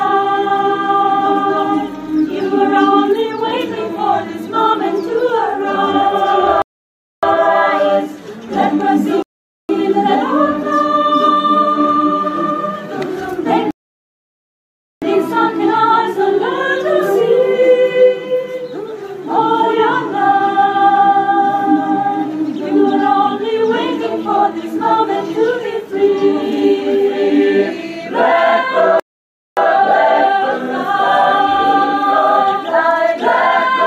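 At 6.62 s the audio drops into silence for about 0.61 s, then picks up exactly where it left off. This is a rebuffering stall: the player exhausted its downloaded audio and paused until more data arrived. The same stall recurs at 9.22 s (0.47 s), at 13.71 s for the longest gap of 1.31 s, and at 29.00 s (0.57 s). Nothing is skipped at any of these points; each gap simply adds time.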